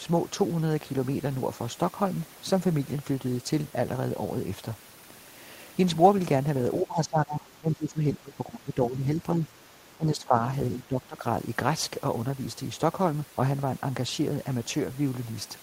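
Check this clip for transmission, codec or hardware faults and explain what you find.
Speech suppressed in double talk occurs three times, from 6.82 to 9.44 s, 9.97 to 10.38 s and 10.74 to 11.24 s. The voice dips up to roughly 20 dB, then less. The likely cause is an echo canceller mistaking overlapping far-end talk for echo. The attenuation is partial and uneven rather than clean silent gaps, which sets it apart from packet-loss dropouts.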